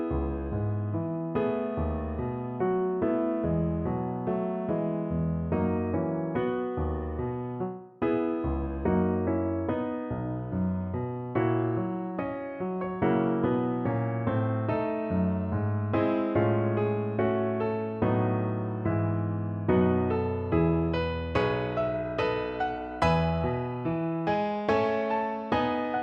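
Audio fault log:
No technical faults can be heard anywhere in the signal.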